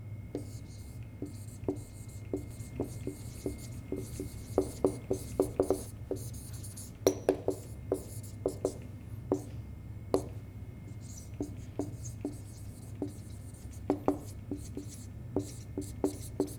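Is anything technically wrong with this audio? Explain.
Yes. From 2.51 to 5.87 s there is a doubled audio track: a dry copy about equally loud trails by roughly one second, likely from a second capture path, starting and stopping abruptly.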